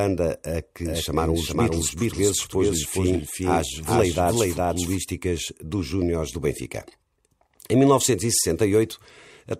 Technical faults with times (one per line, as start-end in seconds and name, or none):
0.85-4.97 doubled audio track